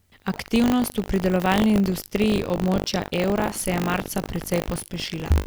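A steady robotic buzz at 50 Hz rides on the speech from start to finish, a rattling edge that sits on the voiced sound and drops away in the gaps. This is buffer tearing. The 50 Hz rate points to a buffer period of about 20 ms. In each period, about a tenth of the audio is stale, roughly 70 ms old, left from an earlier lap of the ring buffer because the writing program and the hardware reader have slipped and now cross inside every period. The hard joins on either side of that stale stretch repeat every period, and that repetition is the buzz.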